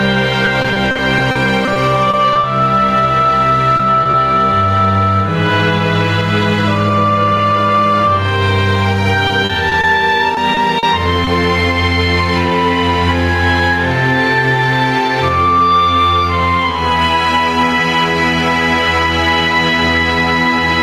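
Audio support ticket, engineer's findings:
Gain pumping, throughout. Input gain set far too high for the mic, likely with a fast limiter or compressor clamping each loud event. Level swings of about 10 dB. Dynamics squashed, loud and soft parts pulled close together.

Repeated packet loss (robotic sound), 0.45 to 2.45 s and 9.27 to 11.29 s. Network dropping or delaying packets in bursts; the jitter buffer or decoder repeatedly extends the last audio to fill each hole. Gaps up to 40 ms, about 13% of the first stretch and 10% of the second concealed. Choppy texture with fragments missing.

Short concealed packet loss at 3.77 to 3.81 s, 4.03 to 4.07 s and 4.11 to 4.15 s. Isolated late or lost packets, each patched by continuing the preceding sound for about 20 ms, then crossfaded back. Heard as brief smears or wobbles, with short transients possibly dropped.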